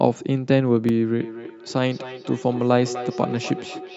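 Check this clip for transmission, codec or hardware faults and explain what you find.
Two faults are present: a momentary dropout to digital silence and an acoustic echo loop between two devices.

At 0.89 s, a block of digital silence: about 5 ms of samples were replaced by zeros, which points to the output buffer not being filled in time. The abrupt cut to silence and back, with no fade, is heard as a tick.

From 1.2 s to the end, feedback echo between two devices: a second device in the room replays the far end's audio into a microphone, and neither echo canceller removes the other device's output. The speech returns roughly every 300 ms, peaking about 12 dB below the direct sound, with a hollow, ringing quality.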